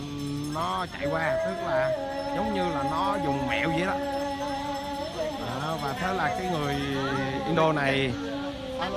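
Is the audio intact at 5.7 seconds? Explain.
Yes, the audio at 5.7 seconds is intact, with no dropout, click, distortion or other fault at that moment.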